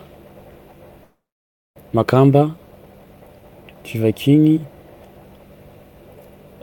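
A long network dropout runs from 1.03 to 1.80 s in this speech clip: the sound trails into a fading buzz, then goes silent for about 600 ms, and resumes with roughly 400 ms lost, likely because packets stopped arriving. A jitter buffer speed-up follows from 1.87 to 4.42 s, with speech playing at 112% speed at unchanged pitch and sounding hurried, as the receiver trims short pitch-period slices, about a third of a second in total, to shed the delay that built up.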